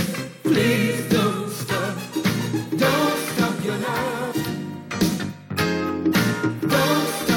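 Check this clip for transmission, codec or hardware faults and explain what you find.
One fault stands out, from 4.31 to 4.33 s: damaged data in a compressed stream. For about 20 ms the encoded bitstream is corrupt, so the decoder misreads those frames, loses sync and hunts for the next valid frame header. The result is a brief glitch where the decoder loses its place. That loss of sync sets it apart from a plain dropout, which is a clean gap of silence, or a simple click.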